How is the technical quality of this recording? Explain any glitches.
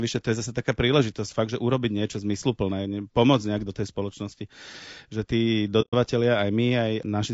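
The technical quality is poor. The speech is plainly degraded by compression, and one short dropout breaks it.

Throughout the clip, the speech sounds rough and grainy. This is likely low-delay AAC compression, the AAC-ELD kind used for video calls. Its short frames capture pitch harmonics poorly. At a rate that fits about 32 kbps, noise fills the gaps between harmonics.

From 5.81 to 5.94 s, the sound fades out and back in. This is AAC frame loss with muting, which fits four lost frames, about 120 ms of audio. The decoder zeroed the missing spectrum. Overlapping windows soften the edges, leaving a smooth hole.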